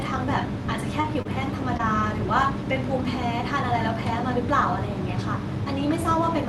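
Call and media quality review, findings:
Short concealed packet loss: brief smears around 1.01–1.15 s, 1.22–1.27 s, 1.77–1.81 s. Jitter buffer/decoder concealment filled roughly 20 ms holes by extending prior sound. Band tops out near 12 kHz.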